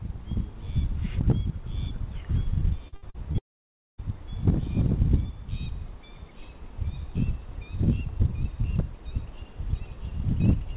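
Audio limited to nothing above 4 kHz, which fits a G.711 A-law call path, shows repeated packet loss (robotic sound) from 2.88 to 3.36 s. Four short holes, the longest 78 ms, are each patched by stretching the previous sound, so about 38% of that span is concealed. The result is choppy, with pieces missing and real audio returning between the holes. Straight after comes one unbroken gap from 3.38 to 4.00 s, likely a long network dropout. About 0.6 s never arrives, and the brief fill fades into near silence for roughly 0.57 s. That single hole is what separates it from the stuttering pattern just before.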